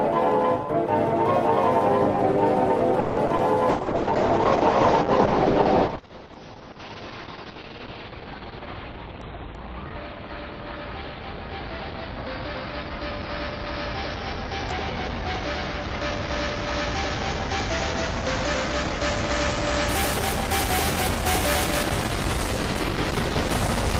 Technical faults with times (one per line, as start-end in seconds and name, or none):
3.00-3.19 call audio freeze
3.27-3.41 short concealed packet loss
3.70-19.95 call bitrate drop
8.52-9.55 jitter buffer speed-up